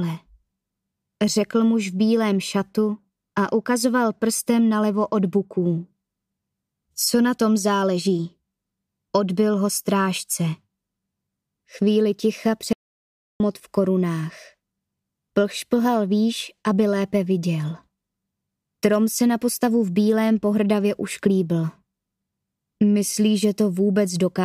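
At 12.73 s an audio dropout to silence cuts the sound for 0.67 s, to 13.4 s: plain silence, no room tone, likely a lost input link.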